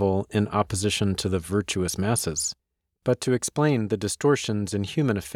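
No technical faults can be heard anywhere in the audio.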